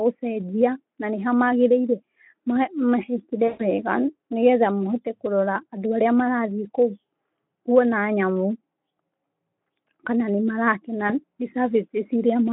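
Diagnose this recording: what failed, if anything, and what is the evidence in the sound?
Network stage: VoIP packet loss concealed by the speech codec at 3.47–3.68 s and 11.08–11.12 s, after "kana nĩ marakena". The decoder extrapolates from the last pitch and filter into a fading buzzy tone or coloured noise, not the hard silence of a dropout.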